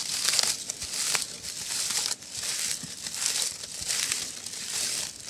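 No technical faults are audible anywhere in the recording.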